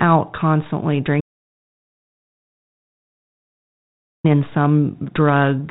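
An audio dropout to silence runs from 1.21 s to 4.24 s, about 3.04 s of the speech simply missing. The sound stops in mid-flow and returns just as abruptly, and the gap between is dead digital silence with no room tone at all. That points to the input feed being lost while the recording carried on writing silence, likely through a dropped connection or mute, so whatever was said in that span is gone. Around it, the 32 kbit/s G.726 telephone coding adds only light roughness.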